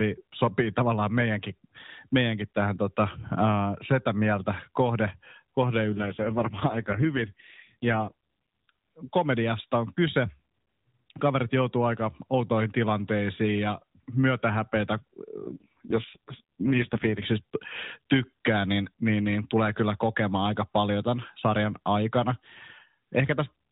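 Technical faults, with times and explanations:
5.90 to 8.13 s and 15.44 to 17.25 s, AMR rate drop: The speech turns rougher, buzzier and more synthetic, then recovers. The band and the timing stay intact, with no gap. The sound fits the mobile codec stepping down from 12.2 to 4.75 kbps. Too few bits remain to model the voice.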